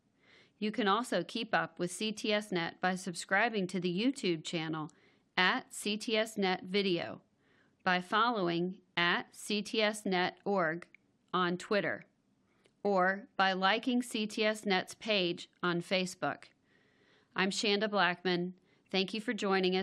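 Speech with no audible faults.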